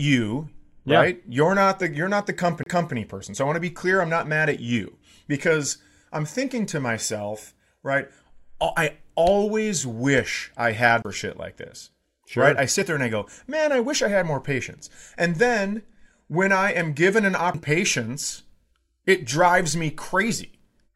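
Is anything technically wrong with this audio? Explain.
Yes. CD skips occur at 2.63–2.66 s, after "the you're not the"; at 11.02–11.05 s, after "always wish I had"; and at 17.54 s, after "I am given an". Each time the laser loses its place and lands on a different turn of the disc's spiral. The player mutes briefly, for roughly 30 ms, 20 ms and a few milliseconds, which is heard as a tick. The speech then resumes from another point, so it jumps abruptly.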